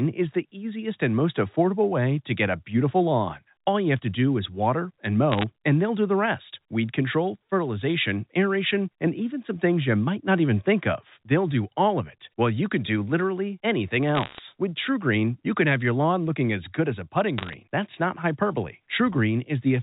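Bit errors on a digital phone line crackle through the speech at 5.32 to 5.44 s, 14.15 to 14.40 s and 17.38 to 17.54 s. Roughly one bit in two hundred is flipped in the first two, and about one in 140 in the last. Each flip corrupts a single A-law sample, so flips that hit a high bit or the sign of a loud sample sound as sharp ticks.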